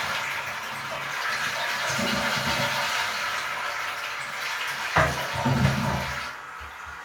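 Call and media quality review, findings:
No audible faults found; no issues to log.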